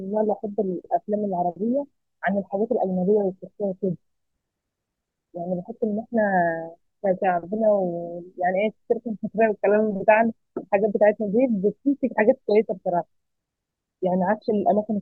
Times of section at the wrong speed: none

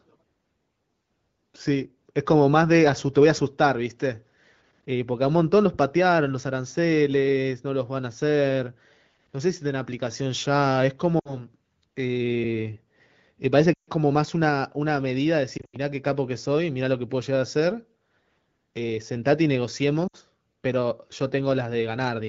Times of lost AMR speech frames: 11.19-11.40, 13.74-13.89, 15.57-15.76, 20.08-20.16

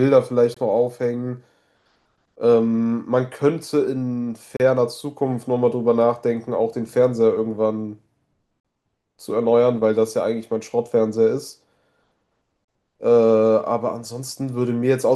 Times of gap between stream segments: 0.54-0.57, 4.57-4.60, 8.60-8.65, 12.65-12.68

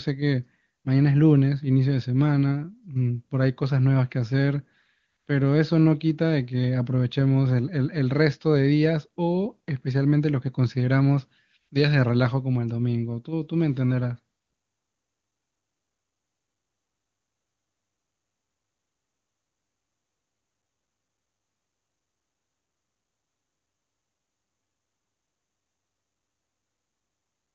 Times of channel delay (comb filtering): none

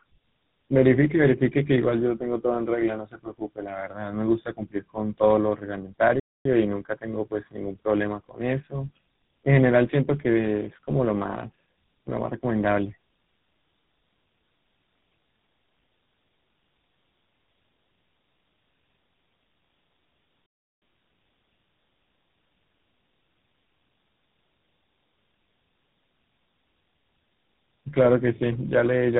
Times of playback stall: 6.20-6.45, 20.46-20.82

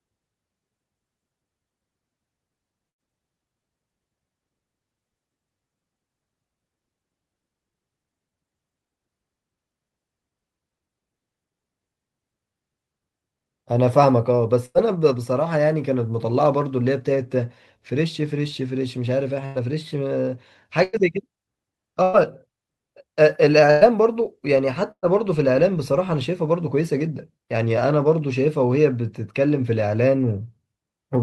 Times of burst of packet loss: 2.89-3.08, 14.66-14.78

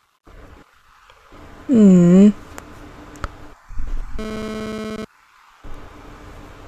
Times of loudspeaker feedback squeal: none

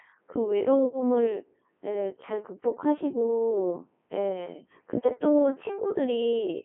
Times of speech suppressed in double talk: none

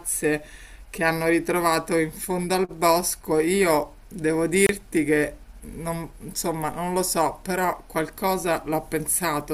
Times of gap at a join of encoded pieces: 4.66-4.69

